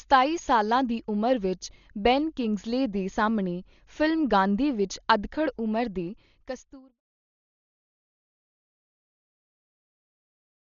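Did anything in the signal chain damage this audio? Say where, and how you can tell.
Yes. Throughout, the speech sounds dull, with nothing above 6.9 kHz, heavy codec damage and rough, fluttering noise; this is likely Dolby Digital compression at the codec stage, fitting roughly 40 kbps.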